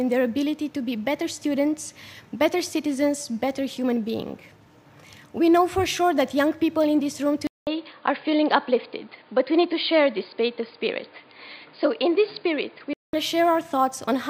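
At 7.47 s the sound drops out for about 0.2 s, then returns band-limited, with nothing above 4.9 kHz. It turns dull and boxy, with a faint new background noise far below the signal. The level stays essentially unchanged. This is most likely an input switched to a poorer device, such as another microphone or a headset's call profile. The narrower capture persists until 13.13 s, when the full bandwidth returns.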